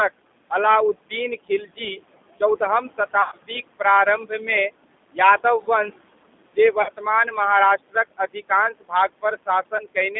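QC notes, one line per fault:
throughout: noise suppressor artifacts. The background is pulled down by about 21 dB between phrases and swells under speech.
throughout: G.729 codec. The band runs only from 200 Hz to 3.6 kHz, and speech has a rough, synthetic quality, consistent with an 8 kbit/s model-based codec rather than plain band-limiting.
1.49–1.99, 2.4–3.8, 4.18–4.48, 6.54–7.37 and 7.78–10.16 s: speech cut by the noise suppressor. Brief stretches of soft consonants and endings, about 1.2 seconds in all, sink by about 13 to 21 dB and sound swallowed, without buzz.
3.22–3.36, 6.82–6.91 and 9.77–9.83 s: VoIP packet loss concealed by the speech codec. Gaps of 100, 60 and 20 ms are filled with stretched, fading sound, then weak distorted speech.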